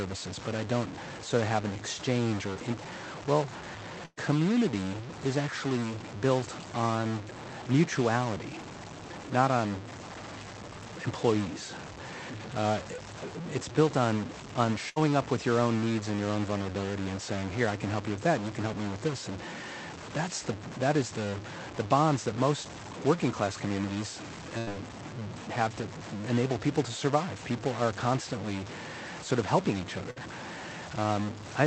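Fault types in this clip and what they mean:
Stuck bit: A distortion runs through the whole recording, and the pauses between phrases carry a gritty noise floor instead of quiet. The likely cause is one data bit held at a fixed value, throwing about half the samples off by that bit's weight.
Short concealed packet loss: At 2.53 s there is a brief smear lasting a few hundredths of a second. About 20 ms of audio never arrived, and the receiver bridged it by extending the preceding sound before blending back into the real signal.
Burst of packet loss: Four times, including after "in well" and after "sort of helping each", the sound becomes a held buzz or fading hiss for about 55 to 120 ms, then resumes further on. Consecutive packets were lost, and concealment stretched the previous sound over the gap.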